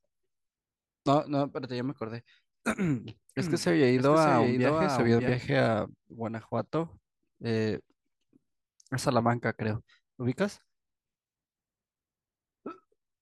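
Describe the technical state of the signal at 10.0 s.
At 10.0 s the speech signal is intact, with no audible fault at that moment.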